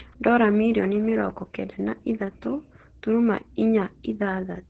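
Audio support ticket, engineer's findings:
Opus voice compression throughout, heavy damage. Speech muffled, hoarse, faintly robotic; nothing above 8.8 kHz. SILK wideband mode, excitation coded coarsely, consistent with about 10 kbps and 20 ms frames. Unlike a plain low-pass, the voice texture is roughened, not merely dulled.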